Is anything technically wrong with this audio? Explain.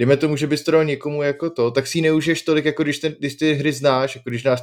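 Yes, there's one glitch. At about 4.3 s there's a bit error spike: a single sample jumps to roughly -24 dBFS when one bit flips in memory or on a digital link, then snaps straight back. You hear it as one sharp, broadband tick that has nothing to do with the speech.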